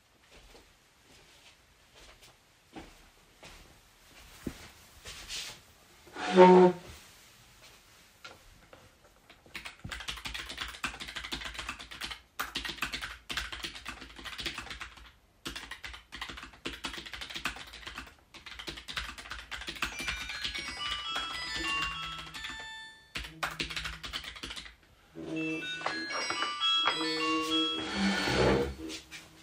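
Around 12.82 s to 12.92 s there's a short burst of DAB burbling, sitting on top of the sound for about a tenth of a second. Weak reception let a small fraction of a percent of bit errors slip past error correction into the MP2 stream. Corrupted samples put short blips of noise in individual sub-bands. Six frames were hit.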